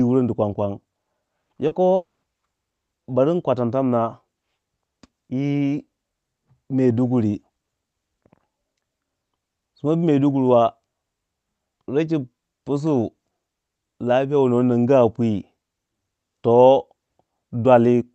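At 1.67 s, about 40 ms of the call's audio failed to reach the decoder in time. This is a short concealed packet loss. The receiver bridged the gap by extending the preceding sound, carrying on its pitch or imitating its noise, and then blended back into the real signal. Within the call's sound, limited to about 8 kHz as fits an Opus stream, this comes through as a brief smear or wobble lasting about 70 ms.

From 1.95 s to 2.26 s, the flow of audio stopped for about 280 ms, most likely a long network dropout. The receiver first stretched the last sound into a fading buzz or hiss. For about 190 ms of that stretch, only silence or faint steady noise remains. The audio then resumes at 2.26 s, and the portion that went missing is simply absent rather than delayed.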